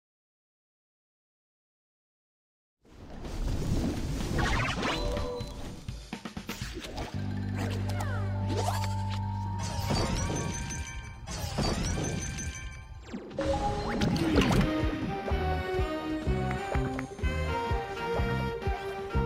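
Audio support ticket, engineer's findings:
No faults found.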